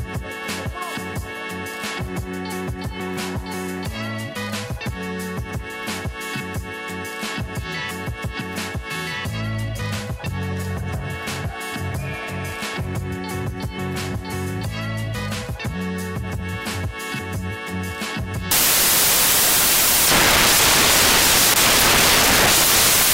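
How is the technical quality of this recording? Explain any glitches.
The recording breaks down near the end: from 18.51 s to 23.13 s its samples are built from the wrong bytes. The decoder assembles each sample with its bytes misordered or shifted, so the rapidly varying low-order bits land in the high-order position. The result is loud, harsh broadband noise, close to white on loud passages. On a spectrogram this appears as a sudden flat wash across all frequencies; the waveform becomes a dense block.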